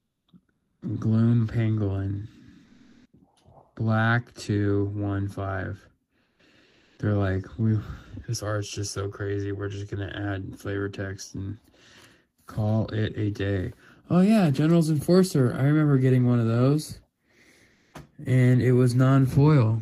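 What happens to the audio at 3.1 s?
At 3.1 s a stretch of comfort noise in place of the background ends: from 2.65 to 3.13 s the real background becomes steady, featureless hiss at unchanged level, likely from discontinuous transmission, not a silent dropout.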